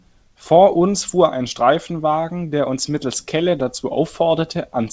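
A faint unsteadiness in tempo runs through the whole speech clip, with small hiccups at uneven intervals. This is clock drift between sender and receiver: the sender's clock runs about 3% slow, so the receiver's jitter buffer keeps draining and must be topped up.

From 0.00 s to 4.30 s the pacing drags slightly, to roughly 97% speed, with occasional tiny stutters. These are repeated timing corrections: the receiver repeats short pieces, all stretching the audio, adding roughly 150 ms overall. The call path's G.722 coding leaves nothing above 8 kHz.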